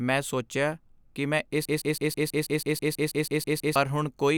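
At 1.65 s, just after "ਮੈਂ ਸੋਚਿਆ ਕੀ ਮੈਂ", the speech locks into a broken-record loop that lasts until 3.76 s. A 0.16 s fragment repeats exactly, back to back, 13 times, producing a rapid mechanical stutter at about six repeats per second. The likely cause is a stalled player or stream resending its last held fragment, so the speech due in those two seconds never arrives. On a waveform or spectrogram, identical blocks tile evenly across the span.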